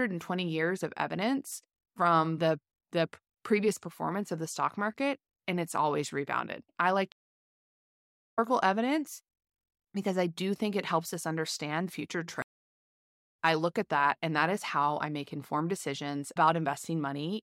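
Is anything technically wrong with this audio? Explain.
Yes, two stream reconnects. From 7.12 to 8.39 s, after "always rebounded I like", the connection breaks and a fresh decoder restarts. The speech returns after about 1.2 s of silence, skipping roughly a second ahead. From 12.42 to 13.35 s, after "helps us understand future", the same happens: about 0.93 s of silence, then "I look at that" arrives roughly 0.7 s later in the speech. Unlike a plain dropout, the speech doesn't resume where it stopped; part of it is lost.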